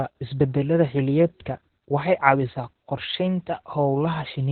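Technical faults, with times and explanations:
Throughout: Opus voice compression. Nothing is heard above 4.2 kHz, so the speech sounds muffled and telephone-like. The SILK coder has narrowed the band and codes the excitation coarsely, giving a hoarse, slightly robotic quality. The heavy damage fits a bitrate near 8 kbps.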